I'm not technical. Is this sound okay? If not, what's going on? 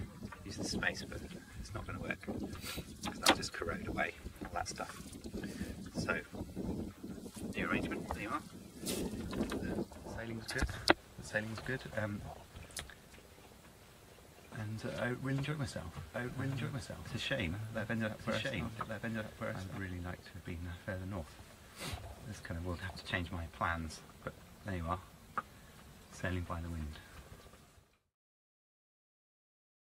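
No. At 9.81 s there is a skip ahead: about a second of sound was dropped, and playback jumps straight to later material with almost no gap.

From 11.7 to 13.1 s, a jitter buffer speed-up plays the sound about 12% faster at the same pitch, trimming roughly a fifth of a second to reduce delay.

From 16.1 to 19.8 s, a doubled audio track adds a noticeably quieter copy trailing about a second behind. It starts and stops abruptly, likely from a second, slower capture path.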